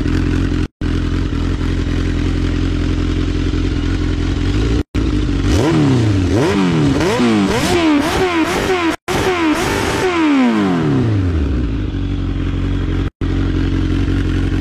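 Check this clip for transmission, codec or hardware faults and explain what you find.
One fault recurs every 4 s: a gap at a join of encoded pieces, at 0.66–0.82 s (156 ms), 4.82–4.95 s, 8.95–9.08 s and 13.08–13.21 s (133 ms each). Separately encoded segments keep their start delay and padded last frame, so silence breaks in and the sound resumes where it stopped. On the waveform these are flat stretches with smeared edges. On the spectrogram they are blank vertical bands.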